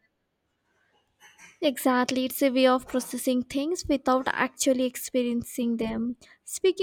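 No faults detected anywhere in the recording.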